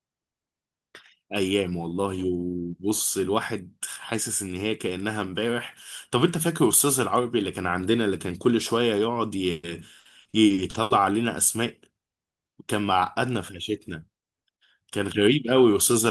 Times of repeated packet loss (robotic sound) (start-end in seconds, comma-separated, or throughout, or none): 9.51-10.93